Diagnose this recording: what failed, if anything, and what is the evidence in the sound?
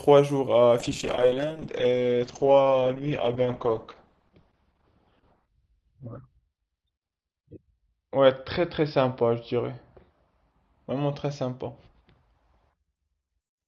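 A call bitrate drop hits the codec stage at 0.84 s and never recovers. The speech turns coarse and watery as the rate slides from 64 to 8 kbps, bottoming out for about 5.5 s, and the top end collapses from 20 kHz to 6 kHz.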